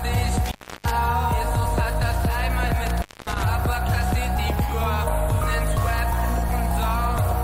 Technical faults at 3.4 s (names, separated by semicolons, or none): intermittent contact